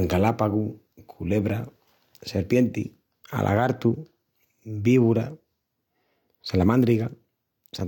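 No technical faults can be heard anywhere in the speech recording, which stays continuous and intact throughout.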